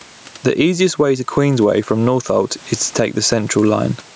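Throughout, the gain swings by roughly 15 dB, leaving the speech squashed and breathing. This gain pumping likely comes from input gain set far too high, with a fast limiter clamping each peak.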